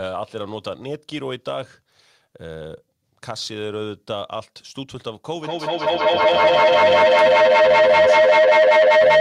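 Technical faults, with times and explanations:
5.35–9.2 s, feedback howl: sound loops from loudspeaker back into microphone and gains level on each pass, so a tone near 700 Hz swells to about 14 dB above the speech and pulses roughly every 200 ms. Unlike echo, the repeats grow instead of fading.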